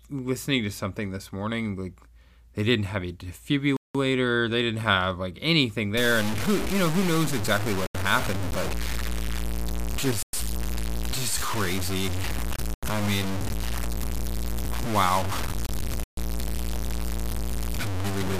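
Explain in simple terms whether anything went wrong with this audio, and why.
Two separate problems are audible in this speech recording.

Bluetooth stall: the sound cuts to silence five times and then carries on. The gaps are at 3.77 s (about 0.18 s long, just before "they didn't have like"), 7.86 s (0.08 s), 10.23 s (0.11 s), 12.74 s (0.09 s) and 16.04 s (0.13 s). The likely cause is radio interference delaying the wireless data, so the headphones ran out of buffered audio and paused until the resent data arrived.

Low bit depth without dither: from 5.97 s, right after "didn't have like anything", to the end, the audio turns rough and grainy, with distortion noise nearly as loud as the speech itself. This fits the sound being stored with only about 4 bits, likely cut down by simple truncation with no dither added. That leaves very few loudness steps, so the rounding error follows the speech and is heard as grit rather than a smooth background hiss.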